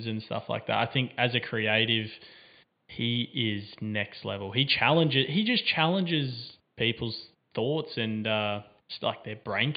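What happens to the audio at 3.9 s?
Nothing goes wrong at 3.9 s; the speech carries on intact there, with only the quiet room noise about 47 dB beneath it.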